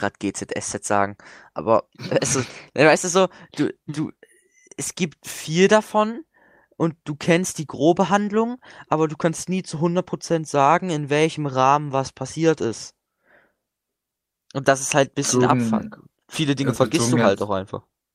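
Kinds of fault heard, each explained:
No technical fault can be heard anywhere in the recording. The speech carries no dropouts, clicks, distortion or level jumps at any point.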